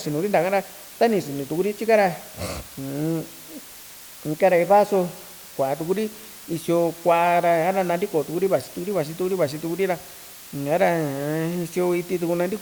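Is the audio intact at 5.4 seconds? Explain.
No. At 5.4 seconds the speech carries low bit depth with dither, present throughout the clip rather than at that moment alone. The hiss level fits a word length of about 6 bits. Random dither was added before rounding, so the quantisation error becomes steady white noise rather than distortion tied to the signal. It sounds like a constant, even hiss roughly 20 dB below the speech, with no grit or crackle.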